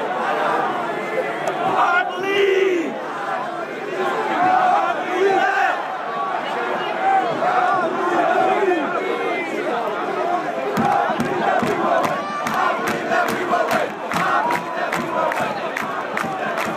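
No technical faults can be heard anywhere in the audio, and the signal stays steady and continuous throughout.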